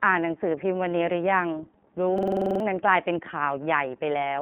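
Throughout this speech recording the sound is thin, boxy and faintly synthetic, with a band that runs only from about 200 Hz to 3.5 kHz and nothing at all above 3.7 kHz. That is the iLBC codec at work. This narrowband VoIP coder handles each 30 ms frame on its own and rebuilds the excitation from a compact description, and at this level of damage, consistent with its 13.33 kbps mode, the roughness is plainly audible. From 2.18 to 2.60 s a separate fault takes over. A short fragment of about 46 ms repeats nine times in a rapid stutter at about 21.5 Hz, so around four tenths of a second of the real audio never arrives. This is a system hang loop. The computer or driver stalled while the audio hardware kept replaying the same ring buffer, and the loop length fits a 2048-sample buffer.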